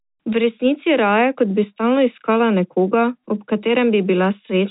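Nothing goes wrong anywhere in this speech; it just carries the narrow, phone-line sound of G.711 telephone coding, with nothing above 4 kHz getting through.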